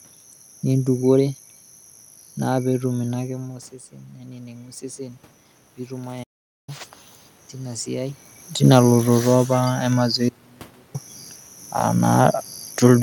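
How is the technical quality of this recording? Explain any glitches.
The recording has three audible glitches: a gradual swell in level, a mid-flow silence, and a later abrupt cut to near-silence.

Automatic gain rising, 2.68 to 6.89 s: the speech and the room noise swell together by about 7 dB over roughly four seconds. The input level fell by about 15 dB, partly as the talker moved away around 3 s, and the gain control slowly raised its gain to compensate.

Playback stall, 6.23 to 6.69 s: the speech stops dead for about 0.44 s of true silence, then carries on. The likely cause is that the player ran out of buffered data, or its thread was blocked, until it recovered.

Audio dropout to a faint residue, 10.29 to 10.94 s: the speech cuts out abruptly for about 0.65 s. It is not silent, though. A faint trace of sound remains, some 35 dB below the normal level. The wanted signal was likely lost upstream while the rest of the path stayed live and passed only that faint residue.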